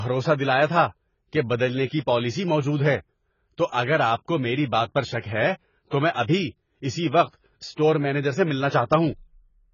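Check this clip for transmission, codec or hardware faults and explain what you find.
A single codec fault runs through the whole clip. Likely AAC compression at a very low bitrate, fitting roughly 16 kbps, cuts everything above 7 kHz and coarsely quantises the rest, leaving the speech dull and smeared, with warbling vowels and fizzy sibilants.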